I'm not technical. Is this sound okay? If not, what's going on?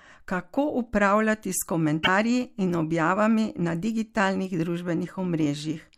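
No. At about 2.0 seconds the speech is interrupted by a short glitch, a chirp, squawk, click or brief gap lasting under a tenth of a second and ending by about 2.08 seconds. This is damaged data in a compressed stream. A small stretch of the saved or streamed file got corrupted, so the playback software briefly couldn't make sense of it, then found its place again and carried on.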